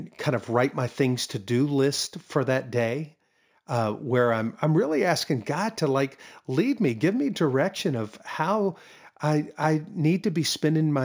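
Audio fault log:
throughout imaging from linear upsampling. Straight-line interpolation dulls the top, fitting a 16 kHz source raised to 44.1 kHz. Images about 30 dB down fill 8 to 16 kHz, adding metallic shimmer.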